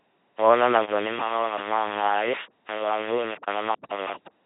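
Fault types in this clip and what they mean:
Low bit depth without dither: Grainy, gritty distortion runs through the whole speech and shifts with it. Quiet parts sputter or drop out. The error sits only about 10 dB below the signal. Undithered rounding to very few bits, around five, is the likely cause.
LPC-10 vocoder: The voice is buzzing and robotic throughout, with stray buzz or hiss where voicing is misjudged. Each moment is rebuilt from a pulse train or noise through a simple vocal tract filter. The heavy damage fits a 2.4 kbit/s stream. Nothing remains above 3.8 kHz.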